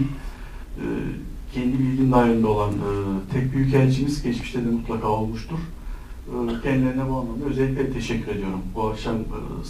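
A gritty, inharmonic fizz rides on the audio from start to finish, rising with loud passages and bright, high-frequency content and sitting at roughly 35 dB below the signal. This is crude rate conversion, and the pattern fits a change from 48 kHz to 44.1 kHz made by simply dropping or repeating the nearest samples with no filtering. That timing error recurs in a fixed cycle and creates shifted, inharmonic copies of the sound itself.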